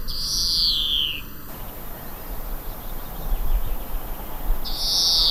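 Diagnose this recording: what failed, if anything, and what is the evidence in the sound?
From the start to about 1.48 s there's channel delay (comb filtering). The sound has a hollow, phasey quality, with a first notch around 700 Hz and more notches stacked evenly above it. That spacing means one channel is running under a millisecond late, only a few samples, before the two are folded to mono. That points to the driver or buffer stage, where shared content cancels at those fixed frequencies. After 1.48 s the hollowness clears.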